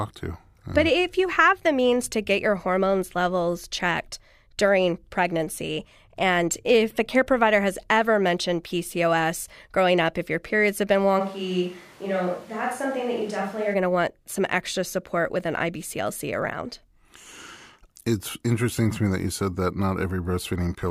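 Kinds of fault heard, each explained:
Switch to a distant microphone: From 11.21 s to 13.73 s, right after "your periods have been", the speech abruptly turns roomy and hollow, thinner in the low end and roughly 5 dB quieter, with room noise rising to about 25 dB below the speech. It snaps back before "going to want some". The sudden change and its reversal point to the close microphone likely dropping out, leaving a pickup further from the talker to carry the signal.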